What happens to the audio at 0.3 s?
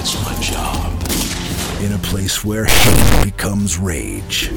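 Nothing goes wrong at 0.3 s; the audio plays through that moment intact, with no audible fault.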